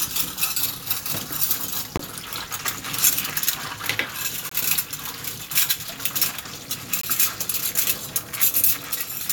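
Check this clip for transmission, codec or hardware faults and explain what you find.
Gaps between chunks appear three times, at 1.97–1.99 s, 4.49–4.51 s and 7.01–7.03 s. Each is a 20 ms silent hole, recurring every 2.5 s of audio, as silence is left at each chunk join before the next block begins.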